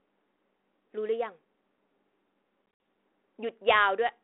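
From 2.66 to 2.8 s, packet loss on an ADPCM call cuts hard-edged silent holes into the speech. About 90 ms goes missing over 140 ms, the longest gap 60 ms. Afterwards the decoder's predictor and step size no longer match the sender's, so speech returns slightly distorted before settling.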